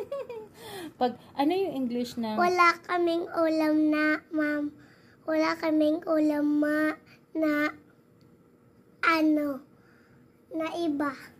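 No technical faults can be heard anywhere in the audio. Nothing in the sound calls for comment from an engineering point of view.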